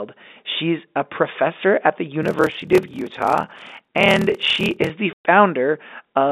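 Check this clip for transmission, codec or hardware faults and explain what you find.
Two faults can be heard in this speech, which arrives over G.711 telephone coding.

Block size mismatch (padded), 2.21 to 4.90 s, after "a professor at the": short blocks are zero-padded into larger reads, producing a 38.3 Hz buzz and slowing the speech to 0.889 times normal speed.

Packet loss filled with silence, 5.13 to 5.25 s: lost packets were replaced by a 120 ms hole of silence, consistent with four 30 ms packets, with hard edges.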